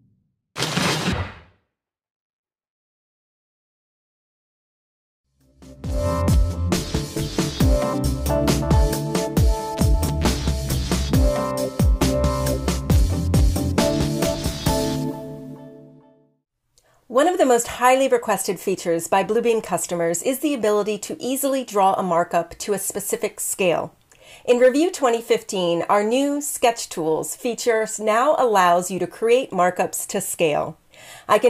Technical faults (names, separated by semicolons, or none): none